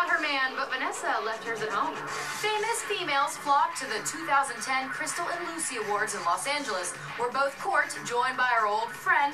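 No audible technical faults occur anywhere in the recording.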